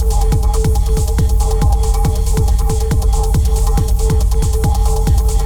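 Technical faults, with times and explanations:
No technical faults are heard, so there are no times or explanations to give.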